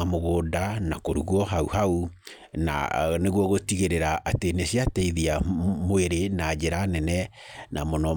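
No technical faults can be heard anywhere in the speech recording; the signal stays continuous and steady throughout.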